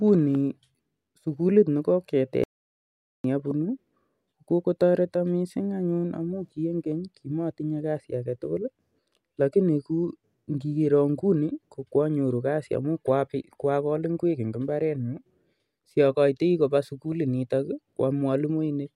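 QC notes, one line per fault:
2.44–3.24 s, audio dropout to silence: the speech cuts off abruptly and returns mid-flow after about 0.81 s of silence, with no room tone, unlike a gate or level dip; likely the input was lost while recording continued writing silence.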